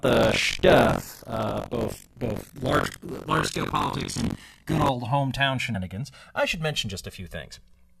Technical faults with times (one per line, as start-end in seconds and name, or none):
0.00-8.00 channels drifting apart
0.00-4.90 buffer tearing
5.74 damaged data in a compressed stream